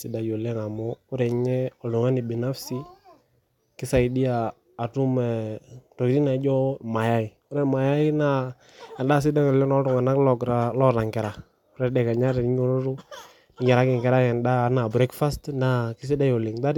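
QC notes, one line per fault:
No faults found in this clip.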